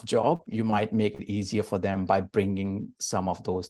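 A brief smear at 0.35 to 0.42 s and again at 1.15 to 1.22 s: short concealed packet loss, where about 40 ms never arrived and was filled by continuing the preceding sound.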